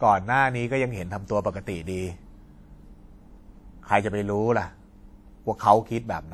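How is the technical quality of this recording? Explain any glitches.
The recording carries plainly audible codec damage from start to finish, most likely WMA compression. The speech has a ringing, washy quality, and a hiss swells and fades with the signal. A transform codec with long blocks smears its quantisation noise over tens of milliseconds around each sound, and weaker spectral detail is discarded, which fits a stream of about 48 kbps. The bandwidth still extends to roughly 20.1 kHz.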